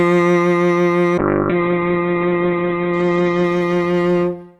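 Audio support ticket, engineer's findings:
Call bitrate drop, 1.18 s to end of clip. Music loses its top end, with bandwidth collapsing from 20 kHz to about 4 kHz. Coarse texture sets in and persists to the end, at the lowest rate for 1.76 s, without recovery. Probable component: Opus encoder after the bandwidth estimate fell. The sound fits a cut from roughly 128 kbps down to 8 kbps.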